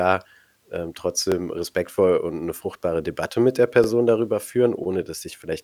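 Overlapping chunks: each 2.5-second chunk begins 23 ms before the previous one ends, so that sliver replays as a brief stutter at 1.32–1.34 s, just before "respektvoll und 'ne fruchtbare", and at 3.84–3.86 s, right after "mit der".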